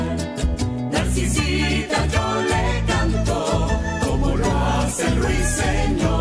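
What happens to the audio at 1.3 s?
Nothing goes wrong at 1.3 s; the audio plays through that moment intact, with no dropout, click, glitch or other fault.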